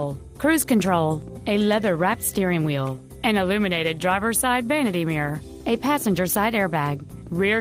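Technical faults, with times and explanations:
Nothing faulty is audible at any point.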